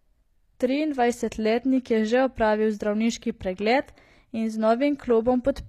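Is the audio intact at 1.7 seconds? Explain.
No, likely HE-AAC compression, present throughout: the treble above the coded band is rebuilt from copied lower bands, so sibilants sound gritty and metallic, with nothing above 14.9 kHz.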